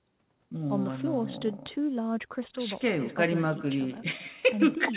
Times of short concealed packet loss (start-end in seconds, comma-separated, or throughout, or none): none